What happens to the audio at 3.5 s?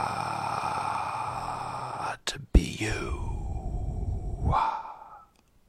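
Nothing goes wrong at 3.5 s: the everyday sound carries on intact through that moment, with no dropout, click or distortion.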